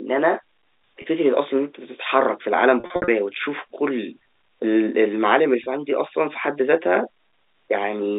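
Packet loss with pitch repetition hits at 1.02–1.04 s, 2.80–3.08 s and 5.64–5.66 s. Missing stretches get bridged by looping the last pitch period, giving brief buzzy holds, choppier through the scattered 280 ms middle patch, all over band-limited G.711 telephone sound.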